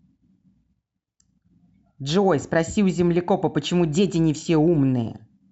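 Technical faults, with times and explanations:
Nothing in this speech recording stands out as a technical problem.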